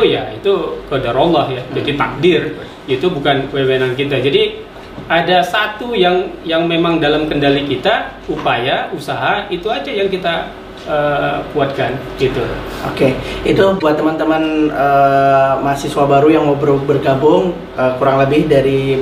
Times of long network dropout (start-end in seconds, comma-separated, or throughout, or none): none